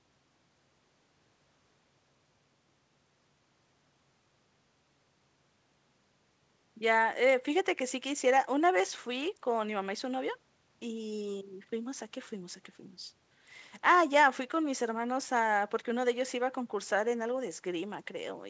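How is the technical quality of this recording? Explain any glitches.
No glitches are audible in the speech, which carries the band limit of a call path with nothing above 8 kHz, consistent with a wideband codec such as G.722.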